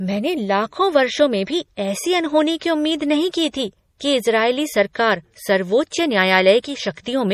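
Throughout, likely MP3 compression at a low bitrate, around 40 kbps, strips everything above 15 kHz and drops weak frequency lines, leaving the speech plainly watery and swirly. At 4.93 s, just after "की थी कि इजरायली", pre-echo appears: codec noise spreads about 18 ms ahead of a sharp attack, heard as a brief hiss that softens its onset.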